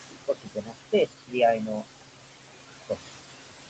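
Right from the start you can hear noise suppressor artifacts. The room noise, sitting only about 9 dB under the speech, gets pulled down by about 21 dB in the gaps and then swells back under each phrase, leaving a residue around the voice.

Then the speech cut by the noise suppressor shows up three times: 0.27 to 0.75 s, 0.92 to 1.37 s and 1.56 to 2.02 s. Each time the suppressor mistakes part of the speech for noise and ducks it by about 20 to 21 dB for roughly a third of a second, so those stretches sound swallowed and faint.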